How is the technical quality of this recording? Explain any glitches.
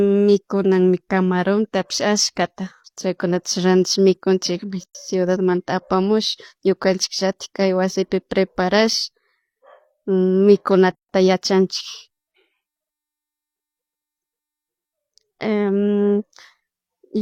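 The recording has two silent dropouts. These are gaps at a join of encoded pieces, at 4.84 to 4.95 s (113 ms) and 10.95 to 11.09 s (144 ms). They come six seconds apart, consistent with separately encoded segments joined with encoder delay and end padding untrimmed. The speech cuts out abruptly with smeared edges, then resumes where it stopped.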